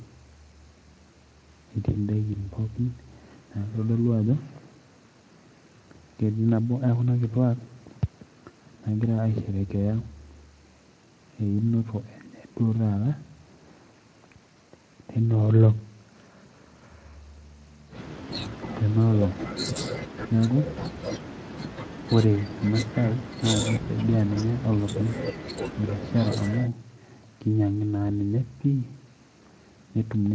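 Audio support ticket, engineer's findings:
No faults found in recording.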